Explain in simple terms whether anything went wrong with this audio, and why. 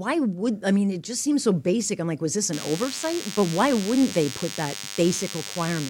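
A nearby cordless phone or its base station was sending short radio bursts 100 times a second, and the recording circuit picked them up. From 2.53 s to the end, this DECT cordless phone buzz sits under the speech as a steady, thin, fairly strong hum.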